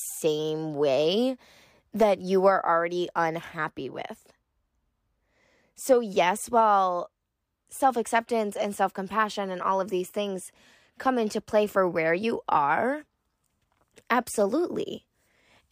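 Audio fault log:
Nothing in the speech stood out as a fault on listening.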